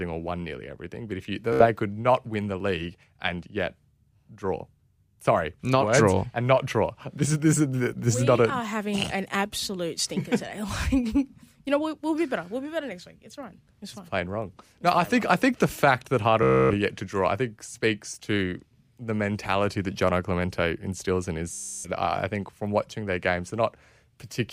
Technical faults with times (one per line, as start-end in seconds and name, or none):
1.53-1.66 Bluetooth stutter
16.43-16.74 Bluetooth stutter
21.53-21.90 Bluetooth stutter